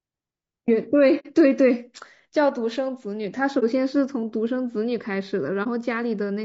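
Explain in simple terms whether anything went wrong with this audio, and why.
Yes, two things went wrong. Throughout, the speech sounds rough and grainy, with a hiss-like fuzz around the voice and a thin, artificial top end. This is most likely low-delay AAC compression, the kind used in video calls, which squeezes sound into very short chunks.

The voice also briefly vanishes three times, at 1.19 to 1.27 s, 3.59 to 3.64 s and 5.63 to 5.67 s. This is AAC frame loss with muting: pieces of data went missing and the player filled them with silence. The sound fades out and back in smoothly.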